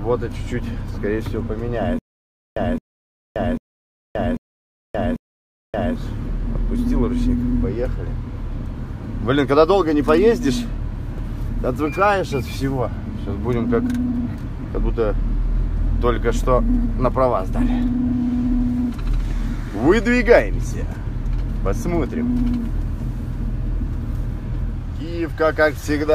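From 1.99 to 5.96 s, a stutter with silent gaps: one 0.22 s burst repeats five times, each followed by 0.58 s of digital silence, on a steady 0.79 s cycle. Unlike a dropout, the fragment recurs, likely a stalled stream replaying its last buffer.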